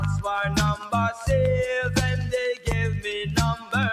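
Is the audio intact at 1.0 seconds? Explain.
No. At 1.0 s, as throughout the clip, a speech-tuned noise suppressor applied to music or sounds pulls sustained tones and tails down by around 5 dB, so the sound pumps, flutters or thins out.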